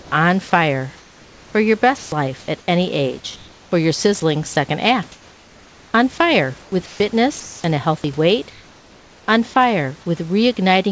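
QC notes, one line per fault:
0.0–0.12 s, 0.98–2.68 s, 5.12–5.94 s and 6.62–7.64 s: comfort noise in place of the background. In the pauses before and after "on fire" and before "any age for your", the room's textured background gives way to a smooth, featureless hiss, about 3 to 4 dB quieter. This is likely discontinuous transmission, with the receiver synthesising noise while the sender stayed silent.
1.98–2.12 s and 7.40–7.64 s: sound dropped by the voice detector. Each time, about 90 ms of real sound disappears under flat synthetic noise and then returns. The likely cause is the sender's detector mistaking a quiet stretch of sound for background and halting transmission.
4.20–4.56 s: sound chopped by the voice detector. Just after "any age for your", the sender likely toggled on and off repeatedly, swapping about 40 ms in short pieces for comfort noise. This leaves two or more holes in the sound.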